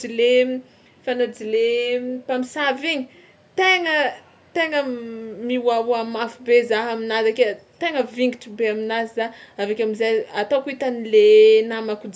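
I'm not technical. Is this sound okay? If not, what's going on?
Yes, there are no technical faults here; the speech has simply gone through the normal microphone processing of a call, which trims away the very deepest bass and leaves nothing above 8 kHz.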